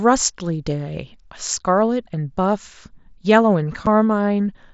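Speech clip with one case of unconcealed Bluetooth headset packet loss at 3.86 s: a hole of about 7.5 ms with hard edges, which points to a single lost packet on the headset link that was replaced by silence rather than patched over. Concealed loss would smear or repeat the audio, not leave a clean gap. The wideband mSBC headset path carries the speech up to 8 kHz, with its light grain on loud sounds.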